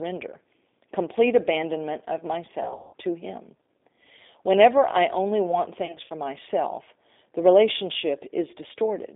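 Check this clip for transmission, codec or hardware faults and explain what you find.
Two faults: a low-rate speech codec across the whole clip, and two bursts of concealed packet loss.

Throughout, the speech passes through a G.729 codec (the G.729A variant). The line is band-limited to roughly 250 Hz to 3.7 kHz, and the stream runs at 8 kbit/s. The decoder rebuilds each frame from a vocal-tract filter, a pitch predictor and a few pulses, so the speech sounds plainly rough, thin and synthetic.

From 2.63 to 2.94 s, between "complete abandonment of" and "to him", there is VoIP packet loss concealed by the speech codec. About 240 ms of audio went missing across a 300 ms stretch, with the longest gap lasting 180 ms, which fits 30 ms packets. With no incoming data, the decoder repeats its last pitch and filter at falling gain. The speech smears into a buzzy tone or coloured noise that fades, and stays weak while the decoder recovers.

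From 5.86 to 6.14 s, between "I only want" and "myself the", the same VoIP packet loss concealed by the speech codec recurs more lightly. About 120 ms was lost across 240 ms, and no gap was longer than 60 ms. The result is briefer smearing and momentary dips in level.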